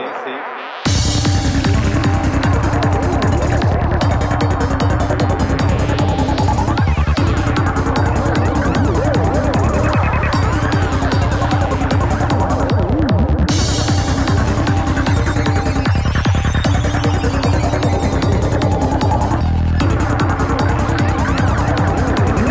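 No technical faults are audible.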